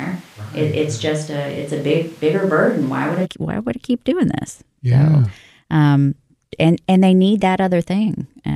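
A switch to a distant microphone is already under way from the start until 3.24 s, just before "why would I keep". The speech sounds roomy and hollow, thin in the bass, about 5 dB quieter, with background noise roughly 30 dB below it. The likely cause is that the close microphone dropped out and a farther one took over.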